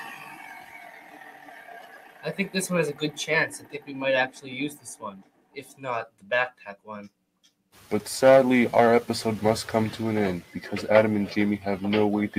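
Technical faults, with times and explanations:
Throughout: a noise suppressor built for speech is still running on this sound. It keeps treating sustained, steady material as noise and ducking it, so the level swings by around 15 dB and the result pumps and thins instead of holding steady.
0.0–2.32 s, 3.52–3.9 s, 4.27–4.5 s, 4.72–5.83 s, 6.08–6.31 s, 6.51–6.88 s, 7.09–7.76 s: sound cut by the noise suppressor. These are the deepest dips, about 11 to 15 dB down. The opening two seconds get hit longest, and held parts sink while onsets still poke through.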